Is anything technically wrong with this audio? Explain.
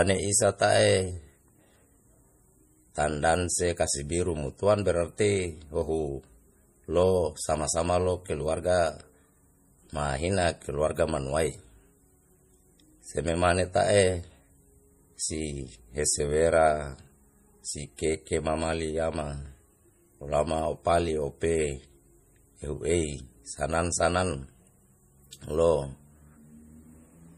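Yes. Throughout the whole speech clip there is plainly audible damage from MP3 compression, likely from encoding at a bitrate as low as 40 kbps. With too few bits, the encoder discards the treble and zeroes weaker frequency lines, which flicker on and off between frames. The result sounds watery and swirly, with metallic chirps on s sounds and smeared consonant onsets. A spectrogram shows a flat ceiling with nothing above 15.2 kHz and patchy, blinking holes in the upper bands.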